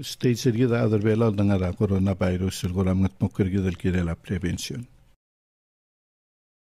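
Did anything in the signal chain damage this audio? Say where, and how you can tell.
Yes, overlap between stream segments during playback stitching: skips at 0.56 s and 4.57 s, 4 s apart, where overlapping timestamps made the player trim milliseconds of audio.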